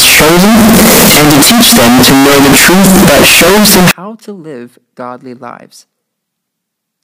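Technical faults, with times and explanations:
0.0–3.91 s, signed and unsigned mixed up: the samples were likely read with the wrong sign convention, which fits 16-bit audio with its top bit flipped. Every zero crossing leaps across the full range, so the speech becomes a loud, harsh roar with no quiet gaps, clearing just before "to live godly lives".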